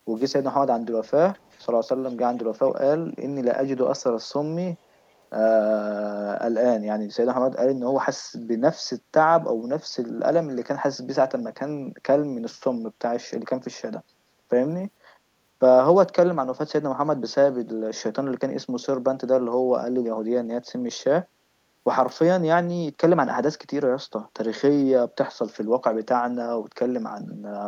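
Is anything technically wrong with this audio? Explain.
Yes, there's an echo leak near the start. Faint delayed copies of the speech, trailing by about 474 ms, turn up at 0.17–0.23 s, 1.33–1.66 s, 2.09–2.14 s, 2.67–2.72 s and 5.07–5.12 s. They're very quiet, roughly 35 to 40 dB under the speech. That likely comes from a far-end speakerphone whose echo canceller let some residue through.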